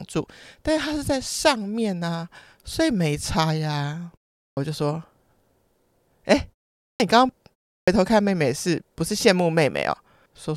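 Speech resumes abruptly out of silence at 4.49 s, 6.92 s and 7.79 s, each time with its opening sounds missing, roughly 80, 79 and 85 ms lost in turn. This is a clipped start after a pause: across the preceding gaps of 0.4, 0.46 and 0.32 s the output device dropped into a low-power idle state, and it was still waking or relocking when sound returned, so the first fraction of each phrase was swallowed.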